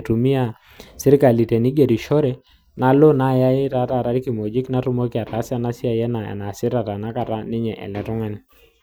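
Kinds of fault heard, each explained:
Nothing here counts as a technical fault; the speech carries on without a hitch from the first moment to the last.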